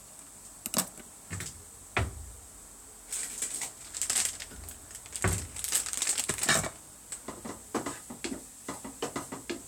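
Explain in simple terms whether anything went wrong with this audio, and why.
Nothing went wrong that I could hear: on listening, no part of this recording of sounds stood out as a problem.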